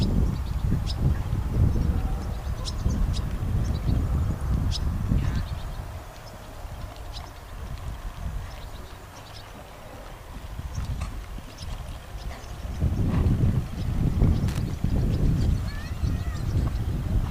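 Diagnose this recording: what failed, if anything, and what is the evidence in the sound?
Loose connector crackle appears from 14.48 to 14.58 s, a short irregular burst of crackle lasting about a tenth of a second. The fault sits in the analogue wiring: a worn or dirty contact in a plug or socket shifted and briefly lost and regained its connection several times in quick succession. Each break chopped the signal, and the ragged on-off switching within that 0.1 s window produced the scratchy, uneven texture.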